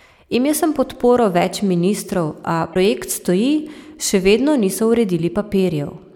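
Damaged data in the compressed stream occurs from 2.71 to 2.76 s. Corrupted bytes in the encoded speech make the decoder misread those frames and lose sync while it hunts for the next valid frame header, leaving a brief glitch heard as a chirp, squawk, click or short hole.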